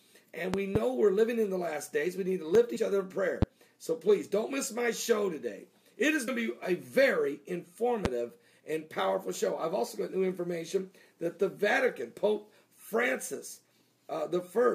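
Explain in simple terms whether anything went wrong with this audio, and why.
Two things went wrong. The first is loud pops, likely caused by a sudden jolt of electricity from a plug, switch, static or driver glitch getting into the signal. Each lands as a sharp thump on top of the sound, which keeps going underneath: two close together between 0.54 and 0.78 seconds, then single pops at 2.55, 3.42 and 8.05 seconds.

The second is compressed frames skipped. Small packed chunks of the audio were missing or rejected by the player, so playback jumps ahead. At 2.75 seconds about 40 milliseconds disappear, and at 6.27 seconds about 70. These gaps fit losing two and three chunks of roughly 21 milliseconds each.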